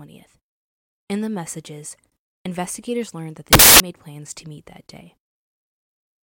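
A speech clip with a short burst of loud, harsh broadband noise from 3.53 to 3.80 s, a little over a quarter of a second, that swamps the signal. This is a case of samples built from the wrong bytes: the reader assembles each sample's bytes wrongly, through an offset, a swapped order or a misread alignment, so the rapidly varying low bits end up as the large part of each value.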